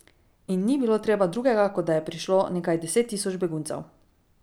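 No technical faults can be heard in this recording.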